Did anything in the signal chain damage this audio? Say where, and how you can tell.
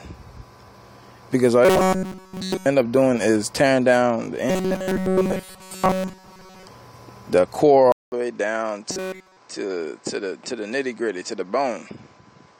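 Yes. At the driver or buffer stage, robotic sound from repeated short buffers appears at 1.65–2.66 s, 4.50–6.67 s and 8.92–9.38 s. Each stretch carries a rigid, metallic 188 Hz buzz, a repeat period of about 5.3 ms, with essentially all of the audio there being replayed copies. The likely cause is input starvation, with the software looping a roughly 5 ms block. A spectrogram would show evenly spaced horizontal harmonics at multiples of 188 Hz, and the waveform would show identical short cycles repeating.

At the capture stage, the input switched to a poorer device at 7.92 s and stays that way through to the end. A 200 ms silence marks the switch. After it the sound turns duller and is around 5 dB quieter, and a new noise floor sits about 40 dB below the signal. This is likely a change to another microphone or a headset profile. On a spectrogram, high-frequency energy stops abruptly at a lower ceiling, with a blank gap at the switch and a raised background haze afterwards.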